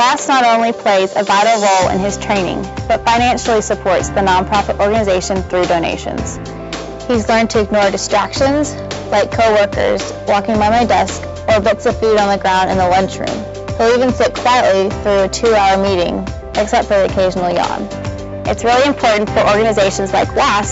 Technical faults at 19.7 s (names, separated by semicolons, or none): none